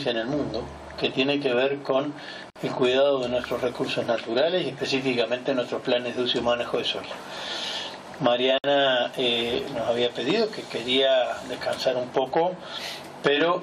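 At 2.50 s and again at 8.58 s, a gap at a join of encoded pieces cuts the sound for about 55 ms and 58 ms. Each silence is encoder start delay and final-frame padding left untrimmed between separately encoded segments. On a waveform it shows as a flat dropout with slightly smeared edges, and on a spectrogram as a narrow, clean vertical blank before the sound resumes where it left off.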